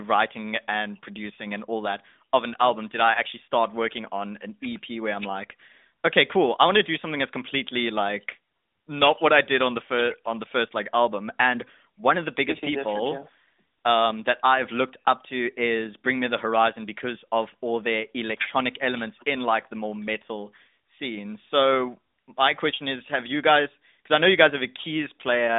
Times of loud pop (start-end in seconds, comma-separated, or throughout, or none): none